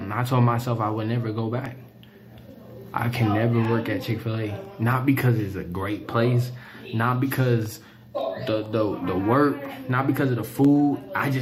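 From 0.66 s to 10.65 s a tick recurs every 1.0 s: periodic USB or driver dropouts, where the bus or driver stalls on a fixed cycle and about half a millisecond of audio becomes silence. Their rigid spacing sets them apart from random clicks.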